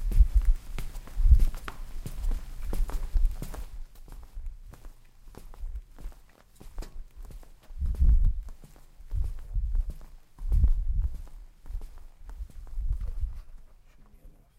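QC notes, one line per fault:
No faults to note in these sounds.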